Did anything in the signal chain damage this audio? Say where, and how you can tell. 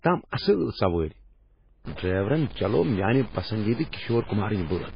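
Yes. Throughout, the sound is watery and swirly with nothing above 5 kHz, likely from codec-stage MP3 compression at a very low bitrate, around 16 kbps.

From 1.85 s to the end, distortion appears and the pauses fill with noise, likely a stuck bit at the converter or in its wiring, pushing about half the sample values off by a fixed amount.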